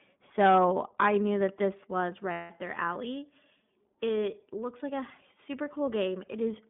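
Throughout, the speech carries iLBC codec coloring: a narrow 150 Hz to 3.6 kHz band, empty above on a spectrogram, with rough, synthetic texture from frame-by-frame excitation coding.

From 2.32 to 2.51 s, after "knew that this was" and before "their alley", lost iLBC frames leave a 180 ms buzzy, held vowel. It looks like a repeated, fading pitch pattern, and the voice recovers immediately.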